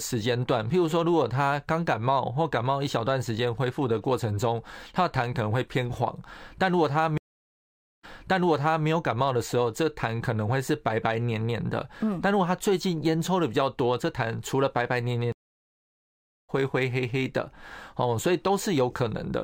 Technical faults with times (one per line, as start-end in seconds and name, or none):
7.18-8.87 stream reconnect
15.32-16.50 stream reconnect